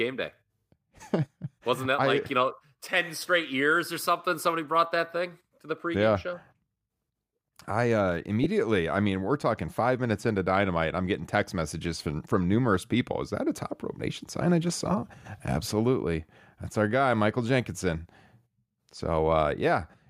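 At 8.44 to 8.46 s, lost LE Audio frames interrupt the speech: about 20 ms of data, which fits two 10 ms frames, never arrived. The decoder filled the gap by repeating the last spectrum with scrambled signs, so the sound briefly turns into a hissy, smeared blur.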